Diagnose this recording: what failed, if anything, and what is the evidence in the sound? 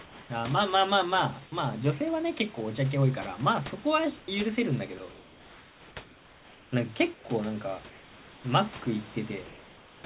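The call-processing stage most likely switched to discontinuous transmission. At 4.20–4.28, 5.10–5.96, 6.04–6.72, 7.14–7.24 and 7.90–8.44 s, comfort noise in place of the background turns the room noise into a steady, featureless hiss, about 2 to 6 dB quieter, until speech resumes.

Sound was also dropped by the voice detector, likely because it misread part of the speech as background, at 4.98–5.00 s and 8.84–8.86 s. In those instants a fragment of speech is replaced by the same synthetic noise, leaving a tiny gap in the sound.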